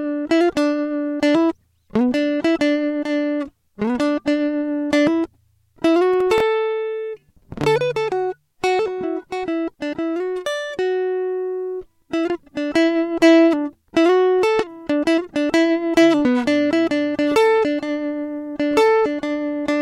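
From 6.14 to 6.40 s the music carries a processor overload crackle. The processor missed a handful of deadlines on tiny buffers, each lasting only a millisecond or two, and each miss repeated old audio with hard edges. Unlike one clean dropout, this is a gritty clustered burst.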